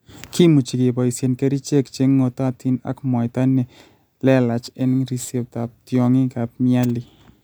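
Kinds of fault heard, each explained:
Crude rate conversion: from 4.57 to 6.07 s the speech picks up a gritty, inharmonic fizz. The sample rate appears to have been changed by simply keeping the nearest sample and dropping the rest, with no filtering, and the pattern of the error fits a 48 kHz to 44.1 kHz step. The skipped samples repeat in a regular cycle, adding tones unrelated to the speech, roughly 30 dB below it, that cling to louder and brighter sounds.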